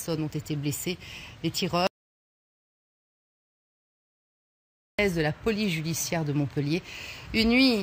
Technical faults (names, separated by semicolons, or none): audio dropout to silence